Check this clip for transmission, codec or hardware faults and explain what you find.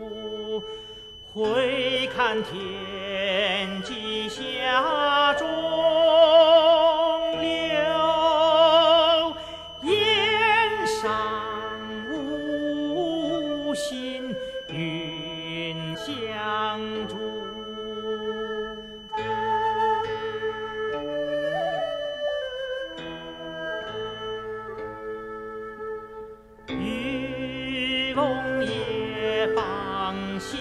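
One fault is present: a feedback whistle from the start of the clip to 24.5 s. A thin, steady 3 kHz tone sits roughly 20 dB below the main sound, swelling and fading slowly in level. The likely cause is a loudspeaker-to-microphone loop held just short of runaway gain, so that single frequency keeps recirculating without building up. A spectrogram would show a narrow horizontal line at 3 kHz ending at 24.5 s. The waveform would barely reveal it.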